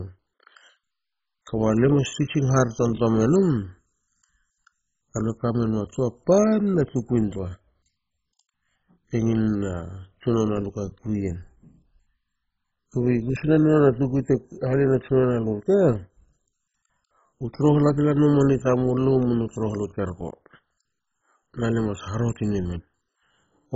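Throughout the speech, nothing is heard above 7.5 kHz, and heavy gurgling, granular distortion comes from coarsely quantised sub-bands flickering on and off. This is likely MP2 compression at a very low rate, around 16 kbps. Unlike a plain low-pass filter, the damage also grinds within the remaining band.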